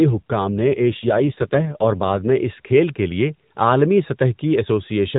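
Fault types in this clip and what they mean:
AMR rate drop: From about 0.48 to 2.36 s, ending just before "اس کھیل کے لیے", the speech turns rougher and more synthetic. The band stays the same and nothing drops out. This fits the mobile codec falling from 12.2 to 5.9 kbps, then recovering.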